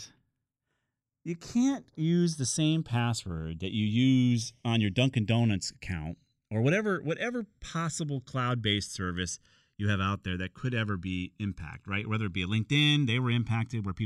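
Channels drifting apart runs throughout this speech clip: the two sides were captured on separately clocked devices, mismatched by something like 70 ppm, so their offset creeps up to about a millisecond, and in mono the shifting comb notches sweep slowly, giving a slow flanging.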